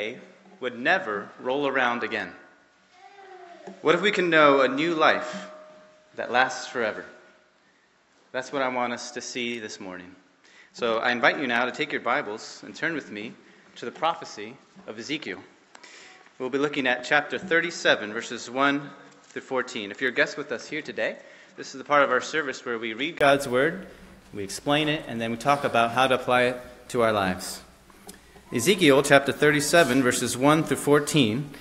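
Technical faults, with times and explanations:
0.0–23.21 s, input switched to a poorer device: the recording likely started on a lesser input, such as another microphone or a headset's call profile, before moving to the intended one. That device passes nothing above about 7.7 kHz, so the first section sounds dull and boxy, roughly 5 dB quieter, with its own faint background noise around 50 dB down. At 23.21 s a brief gap of about 20 ms marks the change, after which the sound opens up.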